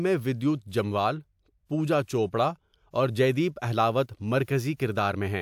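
No technical faults can be heard anywhere in the speech recording. Nothing in it breaks, drops out or changes in a way that would call for a timestamp.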